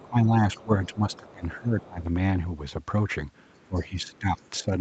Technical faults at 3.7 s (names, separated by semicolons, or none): other side's voice leaking through; speech suppressed in double talk